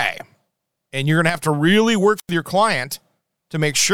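At 1.30 s the speech suddenly drops in level by about 6 dB, then recovers at 1.35 s, a dip of roughly 50 ms. This is a one channel drop out, the likely cause being that one side of a stereo feed went missing for that short span. Once the two channels are folded to mono, the material shared by both is left at half strength, giving that abrupt 6 dB step, and anything present only in the lost side vanishes for the moment.

From 2.16 s to 2.31 s there is a short swell of hiss or static, then a hole of near silence lasting about 92 ms, after which the speech comes back. That pattern is a wireless microphone squelch dropout. The FM radio link from the microphone weakened until the receiver's squelch circuit judged the signal too poor and muted its output entirely, lifting the mute again once the carrier recovered.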